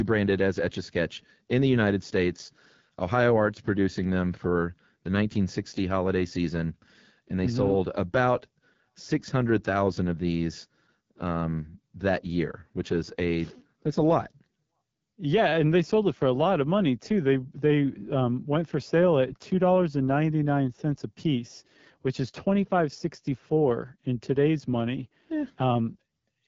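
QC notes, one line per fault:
Throughout: AMR wideband (HD Voice) codec, plainly rough and raspy speech with nothing above 7.6 kHz, which fits the low 8.85 kbit/s rate straining its vocal tract model.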